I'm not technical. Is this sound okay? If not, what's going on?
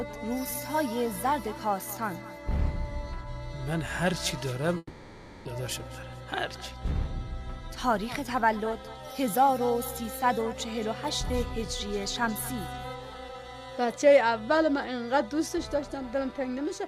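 No. At 4.77 seconds the sound cuts out. A fading buzz fills the gap, then a brief silence. It resumes at 5.47 seconds with about 0.7 seconds lost. This is likely a long network dropout, where the connection briefly stopped delivering audio.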